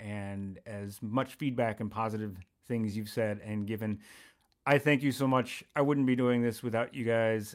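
No technical faults can be heard anywhere in the speech recording, so the signal path shows nothing to report.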